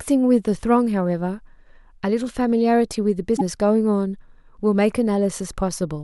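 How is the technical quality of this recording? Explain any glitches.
The recording has one glitch. From 3.36 to 3.41 s the speech breaks into a short chirp, burst of noise or gap and seems to skip ahead. The likely cause is a broken MP3 bit reservoir. Frames were lost, so the next frames pulled data from the wrong place. The damage spans about two 26.1 ms frames.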